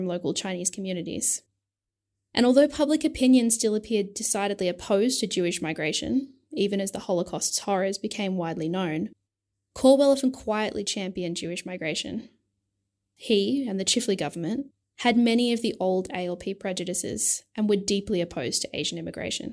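Nothing stood out as a technical fault on listening to this speech recording.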